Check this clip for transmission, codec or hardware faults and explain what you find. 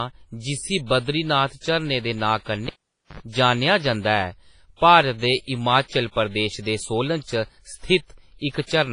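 Two faults are present: codec damage across the whole speech clip, and a cable pull around the three-second mark.

Throughout, the audio is washy and ringing, with hiss that swells and fades with the speech and nothing above 10.5 kHz. This is likely heavy WMA compression at a rate that fits around 24 kbps. Long transform blocks smear quantisation noise over tens of milliseconds, and weak spectral lines are discarded.

From 2.67 to 3.20 s, a cable is pulled and plugged in. A pop starts about 0.48 s of near silence, including a 72 ms burst of 50 Hz mains buzz while only the plug tip makes contact. A second pop follows as the signal reconnects.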